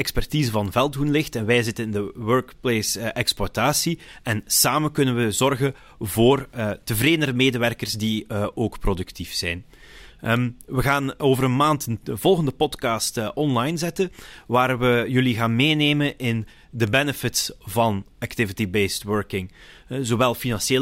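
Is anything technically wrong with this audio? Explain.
Yes, there are bit error spikes, single sharp ticks at 0.66, 10.37, 13.54 and 16.87 s, with the third just after "maand de volgende podcast". Each is one to three samples where a flipped bit briefly pushed the value by a power of two, reaching about -18 dBFS, or about -24 dBFS at 13.54 s.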